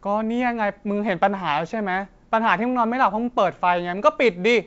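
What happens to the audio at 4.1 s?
Nothing goes wrong at 4.1 s: the speech stays intact there, carried through G.722 wideband telephone coding with its full band up to 7 kHz and no break, click or dropout.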